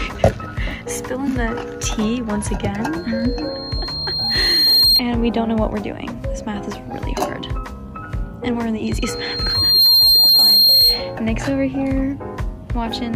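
Loudspeaker feedback squeal appears twice, from 2.96 to 5.02 s and again from 8.84 to 11.16 s, both times as a single piercing tone at 4.2 kHz. A microphone was picking up its own loudspeaker, and at that frequency the loop gain went above one, so the tone fed itself. Unlike a steady interference whine, it swells rather than starting at full strength. It takes around two seconds the first time and about one the second, ending up roughly 10 dB above the sound.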